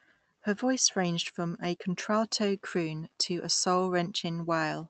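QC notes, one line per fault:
Nothing stood out on listening to this speech clip, which came through a call path.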